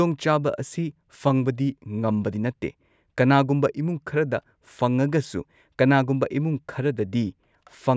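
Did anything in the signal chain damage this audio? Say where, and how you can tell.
No, nothing along the chain seems to have damaged this recording; it's just speech with no audible trouble at any stage.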